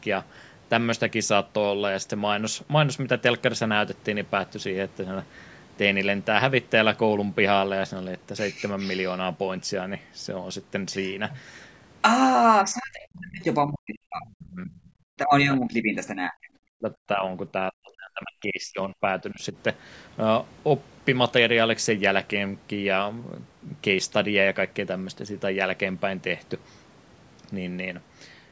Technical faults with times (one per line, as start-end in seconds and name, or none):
12.63-14.71 speech suppressed in double talk
14.85-14.90 other side's voice leaking through
15.13-17.24 speech suppressed in double talk
17.52-19.56 speech suppressed in double talk